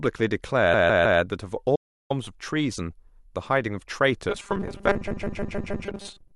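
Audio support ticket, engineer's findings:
Repeated frames, 0.73–1.20 s and 5.07–5.85 s: stutter, same 157 ms block replayed 3 then 5 extra times. Compressed-frame run duplicated in write/transport, adding 0.47 s and 0.78 s.

Audio dropout to silence, 1.76–2.10 s: 0.34 s of silence, no room tone. Likely input loss while the encoder kept writing silence.

Robotic sound from repeated short buffers, 4.30 s to end: rigid metallic buzz at 200 Hz, consistent with a 5 ms buffer looping, with roughly half the audio skipped. Likely caused by audio arriving too seldom.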